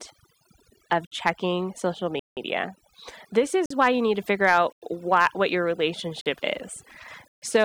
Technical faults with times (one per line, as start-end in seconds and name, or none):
0.00-7.65 overdone noise removal
1.07-1.11 block of digital silence
2.19-2.37 block of digital silence
3.66-3.70 block of digital silence
4.73-4.82 block of digital silence
6.21-6.26 block of digital silence
7.28-7.42 block of digital silence